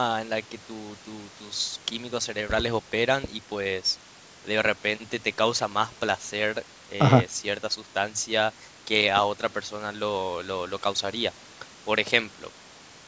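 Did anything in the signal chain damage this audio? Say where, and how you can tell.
No, nothing stood out on listening; the speech has been through a call's microphone processing, which trims the lowest bass and leaves nothing above 8 kHz, and that is what such a path normally does to a signal.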